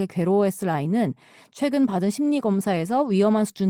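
No technical faults can be heard anywhere in the recording.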